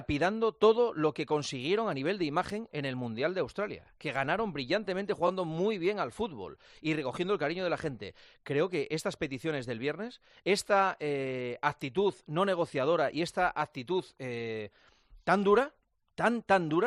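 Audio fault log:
5.27–5.29 s, repeated frames: a brief stutter where the same slice of sound plays twice back to back. A block of about 21.3 ms, which fits a single compressed frame, was decoded again, adding 21.3 ms and a seam at the join.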